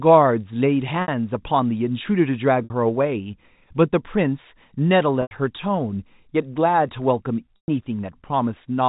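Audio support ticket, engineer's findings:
Packet loss with pitch repetition at 1.02–1.08 s, 2.64–2.70 s, 5.22–5.31 s and 7.56–7.68 s. Gaps of 60, 60, 90 and 120 ms, consistent with 30 ms packets. Last pitch period looped, buzzy hold fading out, cross-fade back in. Band-limited telephone sound of the G.711 path.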